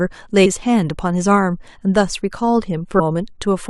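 A brief glitch cuts into the speech at 0.45 s, and another short glitch comes at 2.99 s, each lasting under 20 ms. Both are damaged data in a compressed stream: part of the encoded stream was corrupted, so the decoder misread the frame at each point, lost sync with the frame structure and had to hunt for the next valid header before normal decoding resumed.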